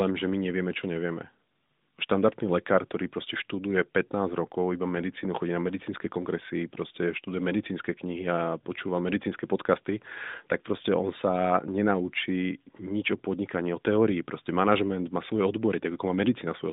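No technical faults can be heard anywhere in this recording.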